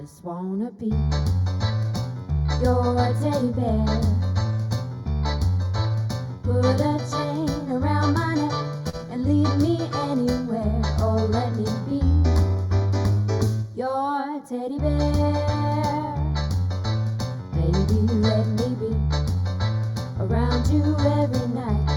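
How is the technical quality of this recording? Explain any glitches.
The recording has two technical problems, one present throughout and one that strikes twice.

Channel delay (comb filtering) runs the whole length. One channel lags the other by a small fraction of a millisecond before they are summed to mono, so shared content cancels at evenly spaced frequencies, starting near 3 kHz. The audio sounds hollow and slightly phasey, with its upper presence thinned.

A short stall from a late packet occurs at 8.89–8.96 s and again at 13.14–13.19 s. Each time a packet missed its deadline, the jitter buffer emptied, and the receiver stretched the last sound, by 36 ms and then 20 ms, before resuming. Nothing is lost, but a sound hangs briefly with a slight buzz or dip.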